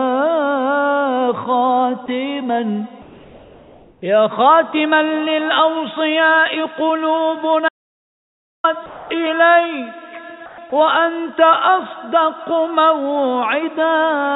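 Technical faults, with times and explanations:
3.02–4.02 s, 8.86–9.10 s and 10.46–10.58 s, comfort noise in place of the background: in the pauses, the real background gives way to a steady, featureless hiss, about 3 dB quieter in the first two and about 5 dB quieter in the last. This is likely a voice detector halting transmission while the receiver synthesises noise shaped roughly like the room. On a spectrogram each stretch is a smooth, even wash with no fine detail, topping out at 4 kHz like the rest of the call audio. On the waveform it is a uniform low band with abrupt edges.
7.69–8.64 s, audio dropout to silence: the sound cuts off for just under a second and resumes mid-flow, with nothing in the gap, not even room tone. This is most likely an input lost through a disconnect, link failure or stray mute while the recorder kept writing silence. On the waveform it is a flat, silent line, and on a spectrogram a completely blank column with sharp edges on both sides.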